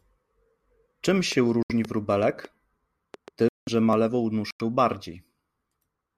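Train of clicks from 1.32 to 3.29 s in this speech recording: a run of similar-shaped ticks, roughly seven of them, arrives at an irregular pace of about 2.6 per second, peaking a few decibels above the talking and audible in the gaps as well as over the voice. The likely cause is an outside pulse source such as nearby equipment or a faulty connection or power supply. Corrupt frames muted at 1.63 to 1.72 s, 3.49 to 3.69 s and 4.51 to 4.61 s: the sound drops abruptly into silence for 88 ms, 205 ms and 106 ms. Each hole is a whole number of frame lengths, which points to frames of roughly 26 to 29 ms that the decoder rejected as damaged. The player filled them with silence, so the timing of what follows is unchanged. Blocks of digital silence at 1.85 s and 3.93 s: the waveform snaps to silence for about 2.2 ms and then 0.73 ms, the second fitting a 32-sample block. These are most plausibly output buffers that were not filled in time. 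With no fade at either edge, each heard as a sharp tick rather than a gap.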